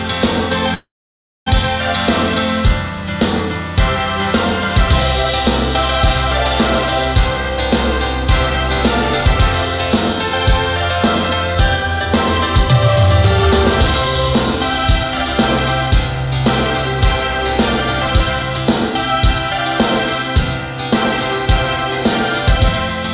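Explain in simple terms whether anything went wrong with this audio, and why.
A call audio freeze happens at 0.74 to 1.48 s, likely because packets were held up on the way and the receiver's buffer ran dry. The last sound is drawn out and then falls to about 0.6 s of silence. When the packets arrive, the audio carries on where it stopped, so nothing is lost, but everything afterwards is about 0.7 s late.

A jitter buffer speed-up happens three times: 8.55 to 10.31 s at 4% faster, 13.87 to 15.32 s at 7%, and 15.87 to 16.27 s at 12%. To catch up on the built-up delay, the receiver snipped out many tiny pieces, around a tenth of a second at most each time. The sound runs faster while its pitch stays the same, and the later two stretches sound hurried.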